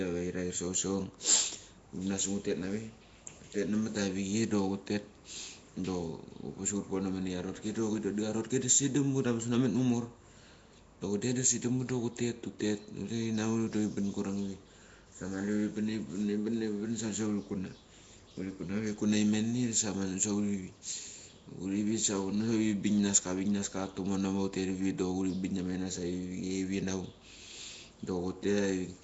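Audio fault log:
throughout, Nellymoser compression: the speech has a rough, hissy halo, a smeared, underwater quality and nothing above 7.7 kHz. The cause is likely the Nellymoser Asao codec, which drops bits from weak bands and fills them with noise. The damage fits a bitrate near 32 kbps.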